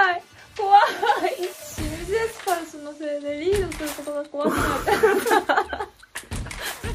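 No technical faults can be heard anywhere in the audio.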